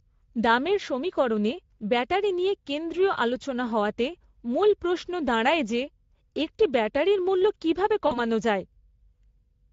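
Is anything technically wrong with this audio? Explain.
Yes, two faults can be heard in this speech.

Throughout, Speex codec damage is plainly audible. The speech sounds noisy and hoarse, which fits a middle-quality mode of about 16.8 kbps that starves the excitation of bits. On a spectrogram, the band above 4 kHz appears as smeared, noise-like fill with no clear harmonic structure.

From 8.07 to 8.20 s, just after "একটি ব্যাটারির মূল্য কীভাবে", VoIP packet loss is concealed by the speech codec. About 40 ms of audio went missing, and the decoder stretched its last pitch and filter into a fading buzzy tone or coloured noise. The speech stays weak for a while afterwards. In the waveform, the envelope decays frame by frame.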